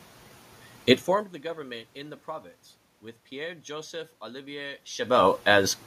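No technical faults can be heard in the speech. The room's own background noise sits under it, and the level shifts near the start and again near the end, as when a talker moves relative to the microphone.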